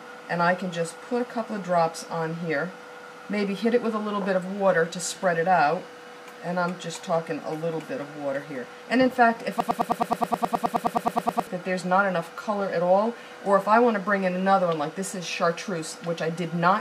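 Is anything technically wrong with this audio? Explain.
Yes. A broken-record loop runs from 9.60 s to 11.47 s. A fragment of about 105 ms repeats exactly, back to back, 18 times. It sounds like a rapid, mechanical stutter with a steady pulse of roughly ten repeats per second. The likely cause is a stall in the player, encoder or stream, which kept resending the last fragment it held. The audio that belonged in those two seconds is gone.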